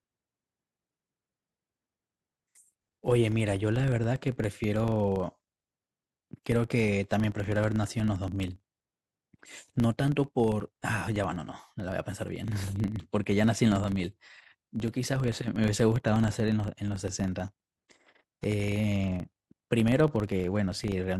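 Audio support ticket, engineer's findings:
Filter restarted on every block: filter state reset to zero at each block boundary instead of carried over, so every block opens with a small transient. Result is a 25 Hz buzz across the whole speech clip, one tick per 40 ms block, loudness tracking speech level.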